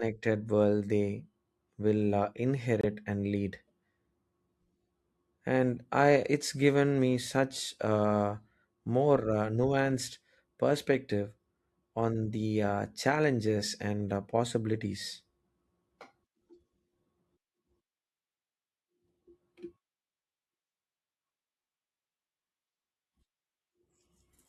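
At 2.81 to 2.85 s, just after "world they will uh" and before "and lead", the speech cuts to silence. This is a Bluetooth dropout, likely from a late packet never reaching the headphones. About 23 ms goes missing, fitting one lost frame. Playback resumes mid-flow.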